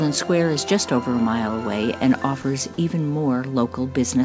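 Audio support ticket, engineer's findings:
At 2.42 s, a 20 ms gap in the sound, filled with steady low-level noise before the signal resumes. Likely sound dropped by the voice detector. The sender briefly classed the signal as background, and the receiver inserted comfort noise. Bandwidth ends at 8 kHz, consistent with G.722.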